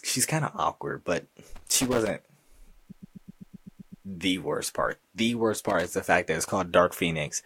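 Just after "kind of awkward but", from 1.56 to 2.10 s, loose connector crackle breaks out: a worn contact keeps making and breaking, chopping the speech into irregular scratchy bursts. The same crackle returns from 5.70 to 5.93 s, just before "the fact that it's". Its randomness distinguishes it from the stutter between them.

From 2.90 to 4.06 s, just before "the worst part", repeated frames make the speech stutter. A 128 ms block plays nine extra times, adding about 1.15 s. Unlike the crackle, these repeats are strictly regular and repeat the same sound exactly.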